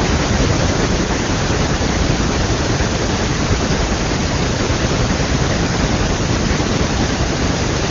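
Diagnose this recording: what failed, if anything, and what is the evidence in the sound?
Nothing failed: the speech passes through the AMR wideband (HD Voice) codec at 23.85 kbit/s, its highest rate, where coding leaves at most faint traces, and no stage from the analogue wiring through to playback shows a fault.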